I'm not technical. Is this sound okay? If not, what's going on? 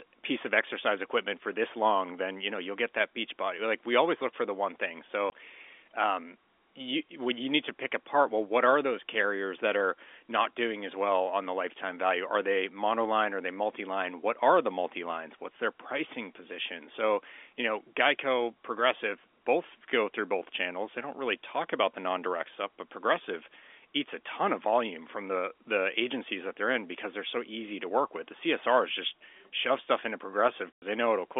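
No. The speech drops out to silence twice: once for a blink, from 5.30 to 5.32 s, and once for about a tenth of a second, from 30.73 to 30.82 s. This is packet loss filled with silence. The call sends sound in small chunks, some chunks never arrived, and the receiver played nothing in their place. The gap lengths fit one lost 20 ms chunk, then five in a row. The narrow, phone-like tone comes from G.711 telephone coding and is expected on a phone line.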